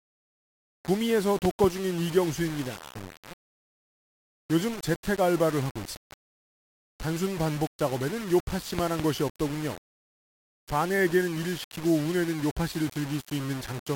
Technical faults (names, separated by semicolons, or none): low bit depth without dither